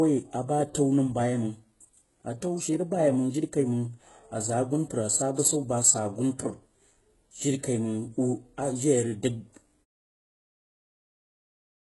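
Throughout the speech, the treble appears to have been rebuilt by spectral band replication, likely from heavy HE-AAC compression at a rate that fits about 12 kbps. Nothing survives above 11.5 kHz, and s sounds turn gritty and metallic. A smooth fade-out comes around 10 s.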